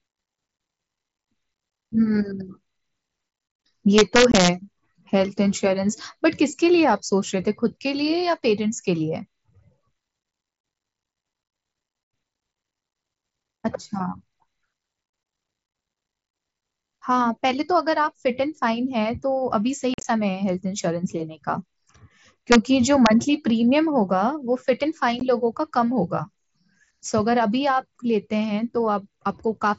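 Speech over what sounds like a wideband mSBC Bluetooth headset link, with two problems. Integer overflow hits at 3.98 to 4.49 s, 22.52 to 22.56 s and 23.06 s: loud peaks only about 1 to 2 dB past full scale wrap to the opposite sign instead of being limited, so you get harsh cracks far nastier than ordinary clipping. Then there's unconcealed Bluetooth headset packet loss, where dropped headset packets leave abrupt gaps: 22.5 ms at 4.32 s (inside the first overflow), 15 ms at 12.40 s, another short hole at 25.20 s, and a rough chopped patch from 19.94 to 20.05 s where 75 ms goes missing across 105 ms, the longest single gap about 45 ms.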